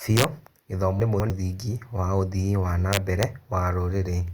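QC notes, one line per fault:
0.17–0.24 s: integer overflow. The speech peaks overshoot the integer limit by about 1 dB. Instead of being held at full scale, those samples wrap to the opposite sign and swing across the full range, so short, violent cracks sit on the loudest moments. They are much harsher than clipping would be.
1.0–1.3 s: chunks out of order. A 100 ms chunk of speech plays two chunk slots late, after the two chunks that should follow it. No audio is missing, but the sequence is scrambled and there are three hard joins around a briefly garbled moment.
2.93–3.23 s: integer overflow. Peaks here exceed the limit by about 2 dB and wrap to the opposite extreme rather than being limited. Over this longer stretch the sign flips recur on the loud parts, giving a burst of sharp cracks.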